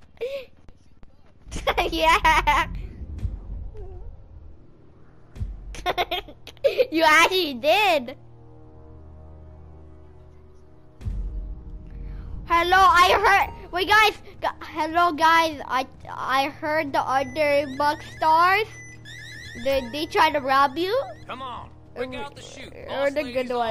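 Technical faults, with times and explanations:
16.23–16.28 s, repeated frames: a 46.4 ms block, likely two compressed frames, plays once more, adding 46.4 ms. It is heard as a brief stutter, and the waveform shows an identical copied segment.
19.64 s and 22.19 s, DC steps: the waveform's zero line jumps abruptly and then decays back slowly, as if through a 2 Hz high-pass. Each is heard as a low thump, and the spectrogram shows a low-frequency smear.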